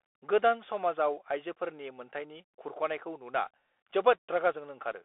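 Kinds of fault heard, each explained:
Bluetooth CVSD headset codec: The speech is squeezed through the narrowband headset codec, which codes just one bit per step, up or down, with a step size that keeps adapting, and that fits the 64 kbps CVSD link. Nothing gets through above about 3.8 kHz, the band sits roughly between 300 Hz and 3.5 kHz, and the damage is plainly audible: the s sounds come out scratchy, louder bright bits distort, and a grainy hiss runs underneath.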